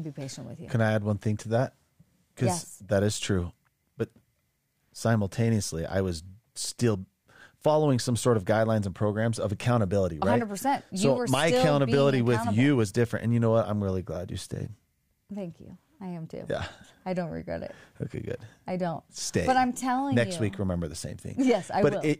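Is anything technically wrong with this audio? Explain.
No, nothing is technically wrong.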